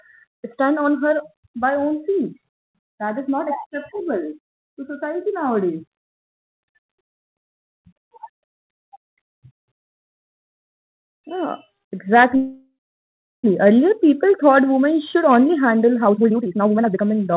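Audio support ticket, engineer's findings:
12.36–13.46 s: sound stalls, trailing buzz fades to silence for about 0.7 s, then resumes where it left off. Likely a call audio freeze, with jitter buffer starved by late packets.

16.05–17.36 s, right after "women should only handle": jitter buffer speed-up. Pitch holds but playback runs at 174%, with about a second of pitch-period chunks trimmed to shed backlog.

Call path audible as narrowband, nothing above 4 kHz, which fits G.711 mu-law at 64 kbps.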